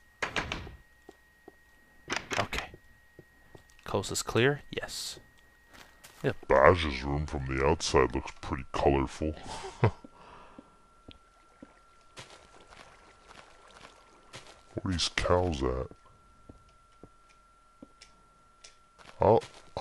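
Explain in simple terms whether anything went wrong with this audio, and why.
A section at the wrong speed runs from 6.44 s to the end. The sound slows to about 0.72 times its proper speed and drops roughly five semitones, deeper and more sluggish. It was likely played back or edited against the wrong clock.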